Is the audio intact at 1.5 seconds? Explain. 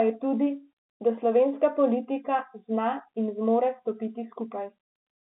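Yes, the audio is intact at 1.5 seconds, with no fault at that moment.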